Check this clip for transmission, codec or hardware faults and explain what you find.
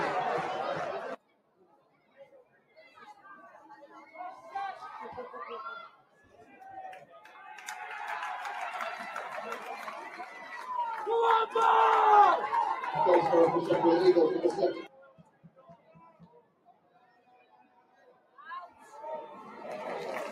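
A speech-tuned noise suppressor was left running on non-speech sound, treating steady tones and tails as noise; levels swing by roughly 20 dB, so the sound pumps and thins.

Sound cut by the noise suppressor: it misjudged passages as noise and pulled them down at 1.17–3.25 s (about 16 dB), 3.52–3.9 s (about 7 dB), 5.89–6.61 s (about 14 dB), 7.0–7.41 s (about 11 dB), 14.81–18.4 s (about 16 dB) and 18.67–18.93 s (about 10 dB). Sustained and decaying parts sink while attacks survive.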